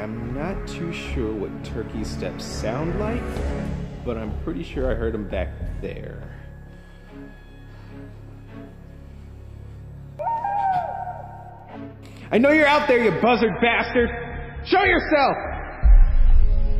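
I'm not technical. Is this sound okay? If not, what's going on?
No. From 13.23 s to the end, the sound abruptly turns dull, with nothing above 5.6 kHz. This is an adaptive stream at a lower bitrate: the connection slowed, so playback switched without a gap to a lower-quality version.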